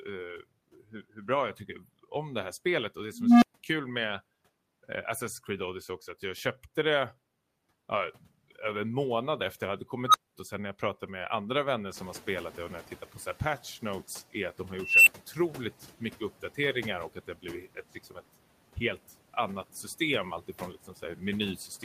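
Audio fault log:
throughout: noise suppressor artifacts. Steady noise is pulled down by about 11 dB frame by frame, so it sinks between words and rises under them.
3.13–3.59 s, 10.06–10.35 s, 14.82–15.17 s: unstable filter. A recursive filter runs away, and a tone near 200 Hz, 1.5 kHz, then 3 kHz swells over 287, 80 and 250 ms and clips. The output then overflows and drops out for 171, 213 and 107 ms until the filter resets.
11.94–13.63 s: noise suppressor catching up. Room noise jumps about 15 dB near 12 s and passes through with less reduction at first, then sinks by about 8 dB as the estimate adapts over 1.69 s.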